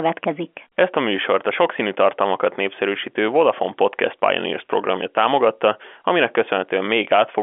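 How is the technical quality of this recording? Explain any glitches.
Nothing stood out on listening; the speech sounds like an ordinary telephone-line recording, with no glitches to explain.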